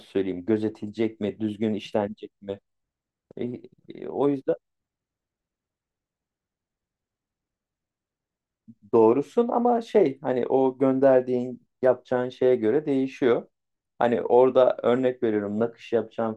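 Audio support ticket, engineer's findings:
Engineer's findings: no audible fault in the speech recording, so no component or mechanism to report.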